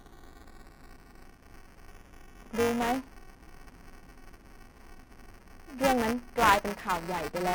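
A steady robotic buzz at 375 Hz sits under the speech from start to finish, a gritty rattle that follows the voice and drops away in the pauses. This is buffer tearing. The program filling the ring buffer and the hardware reading it have drifted out of step so that they cross inside each period. In every buffer, around a tenth of the audio is stale material from a few milliseconds earlier, spliced in with hard joins. The repeat rate fits a 128-sample buffer.

From 1.31 to 1.52 s, a short burst of dry crackle rides on top of the buzz, sounding like the speech is being chopped into gritty fragments for about a fifth of a second. This is processor overload crackle. The processor fell behind and missed several audio deadlines in a row. Each missed buffer, around 10 ms long, went out as silence with abrupt edges, which points to roughly a handful of dropouts clustered together before the load eased.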